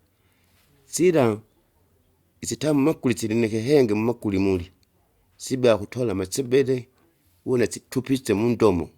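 No dropouts, distortion, noise bursts or timing problems turn up anywhere in the recording, so there is nothing to log.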